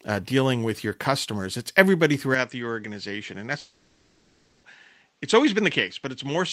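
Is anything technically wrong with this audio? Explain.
Yes, there are two faults.

From 2.34 s to the end, the audio abruptly loses everything above 8 kHz and drops about 5 dB, with a faint new noise floor. This is likely the input switched to a poorer device.

From 3.59 to 4.65 s, about 1.04 s of speech is missing, replaced by a synthetic continuation of the preceding sound. This is likely a long network dropout.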